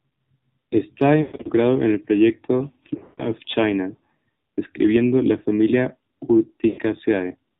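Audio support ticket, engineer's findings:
AMR narrowband mobile codec, full clip. Band-limited speech, nothing above 4 kHz, buzzy synthetic timbre, plainly audible. Vocal-tract model driven by sparse pulses at low bit allocation; degree of damage fits the 7.4 kbps mode.

Lost AMR speech frames, three events. 1.22–1.48 s, just before "en el proyecto"; 2.94–3.30 s, just after "en el proyecto"; 6.68–6.80 s. Smeared, drawn-out sound sagging toward silence, weak on recovery. Decoder concealment repeating last good parameters with decaying gain. First two events lose about 200 ms each across 240 ms, with runs of 120 and 140 ms. Third loses about 100 ms.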